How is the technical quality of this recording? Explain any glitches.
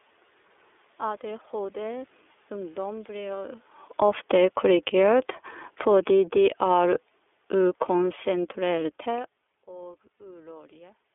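The recording has plainly audible narrowband codec damage throughout, several gain swings between about 3.9 and 9.4 s, and one brief dropout near the end.

iLBC codec: For the whole clip the sound is confined to a telephone band of roughly 300 Hz to 3.5 kHz, with nothing above 4 kHz. The speech has a rough, slightly synthetic grain. iLBC codes each frame's excitation independently, and the texture fits its 30 ms, 13.33 kbps mode. Unlike ordinary band-limiting, the damage here is a rough, synthetic coarseness inside the band, not just missing highs.

Automatic gain falling: From 3.86 to 4.98 s the level sinks by about 7 dB. It drops again by about 5 dB from 5.71 to 6.68 s and by about 4 dB from 7.51 to 9.35 s. Each time the gain control judged the input too hot and pulled its gain down over roughly a second. The room noise sinks with the speech, and that is the tell. When the talker shifts position, around 3.5 s and again near 9.0 s, the voice changes at the microphone while the background stays put.

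Automatic gain rising: Between 4.22 and 5.41 s the gain climbs back by about 5 dB, overlapping the first drop, so the level dips and then swells. The control decided the signal had become too quiet and raised its gain gradually. Voice and background grow louder together over about a second, which again separates it from a talker leaning closer.

Lost iLBC frames: At 10.18 to 10.20 s there is a short, held, slightly buzzy stretch lasting about 30 ms, which points to a single lost frame. The decoder filled the gap by repeating the last pitch cycle mixed with noise. Because iLBC frames stand alone, the speech is clean again immediately afterward, with no smeared recovery as in codecs that depend on earlier frames.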